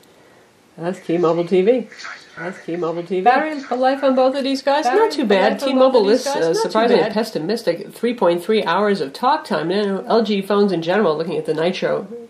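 The audio carries a doubled audio track from 2.37 to 7.13 s: a second full-band copy trails about one and a half seconds behind, roughly 5 dB quieter, likely from a slower duplicate capture path. On a spectrogram the same patterns repeat, offset and fainter, starting and stopping abruptly with no decay tail.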